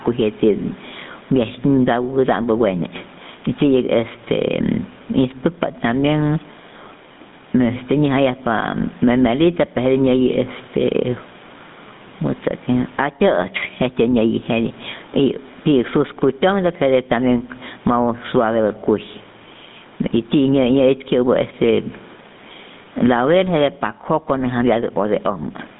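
From start to finish, gain pumping: the background, itself sitting about 42 dB below the speech, swells in every pause and ducks under each loud syllable, swinging around 20 dB. This is likely excessive gain with a fast limiter clamping down. On the waveform, the floor visibly rises between phrases.

Throughout, the GSM full-rate codec leaves a buzzy, gravelly roughness, consistent with 13 kbps encoding. The spectrogram shows energy confined to roughly 150 Hz to 3.7 kHz, with nothing above 3.8 kHz.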